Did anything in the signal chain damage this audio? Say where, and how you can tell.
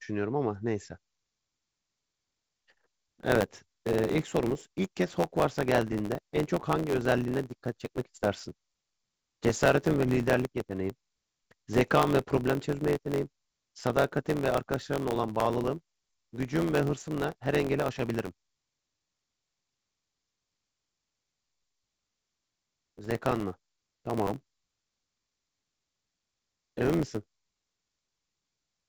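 Yes. From 1.59 s to the end, the speech carries a steady buzz at about 92 Hz and runs about 1.07 times too fast while keeping roughly its normal pitch. That is a block size mismatch (truncated) at the driver or buffer stage. One stage writes blocks longer than the next one reads, which fits 512-sample blocks, and the tail of each block is dropped. Each cut produces a tick at the block rate, and the missing material speeds the speech up. The G.722 band limit near 7 kHz is from the wideband coding.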